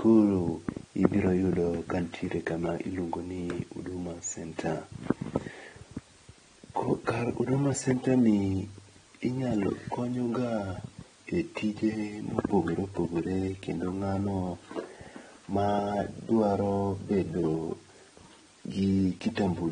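From start to finish the speech carries AAC compression damage, likely from AAC-LC at a rate that fits around 32 kbps. Nothing comes through above 9.7 kHz, so it's dull, and the codec's coarse quantisation leaves sibilants fizzy and the sound smeared.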